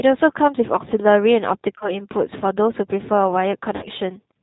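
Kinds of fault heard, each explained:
G.729 codec: The speech is rebuilt from a vocal tract filter, a pitch predictor and a few pulses per frame, which fits an 8 kbit/s G.729 stream. Nothing above 4 kHz survives. The roughness and synthetic edge are plainly audible throughout.
VoIP packet loss concealed by the speech codec: Missing audio was filled in by extending the last pitch and filter with falling gain. About 30 ms is lost at 1.78 s, and about 60 ms at 3.76 s. Each gap is stretched into a buzzy tone or coloured noise that fades, and the sound stays weak until 2.0 s and 3.88 s.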